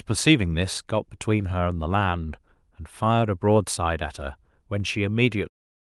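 No faults detected in this speech; the level simply eases down in a smooth fade-out that finishes at 5.5 s.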